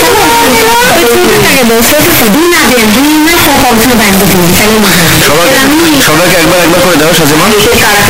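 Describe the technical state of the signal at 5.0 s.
At 5.0 s the signal shows float read as integer, present across the whole clip. The likely cause is 32-bit floating-point samples being interpreted as 32-bit integers, so each sample's sign and exponent bits decide its value. The waveform is pushed into a near-square shape at an almost fixed, high level regardless of the original level, making the sound very loud and harsh, with background noise as loud as the main content, while pitch can still be followed.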